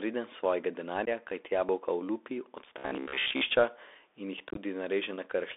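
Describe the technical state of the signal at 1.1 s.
At 1.1 s the signal is just emerging from a burst of unconcealed Bluetooth headset packet loss between 1.05 and 1.09 s, right before "kajti jabolka olupi". A few short voice packets, about 15 ms in total, were dropped and replaced by silence or an idle pattern. The result is an abrupt hole, and the speech returns briefly quieter.

Underneath, the whole clip carries the Bluetooth CVSD headset codec. Its narrowband sound, limited to roughly 300 Hz to 3.6 kHz, fits a 64 kbps one-bit delta link whose adaptive step lags loud high content. That lag makes sibilants scratchy and leaves a plainly audible granular hiss.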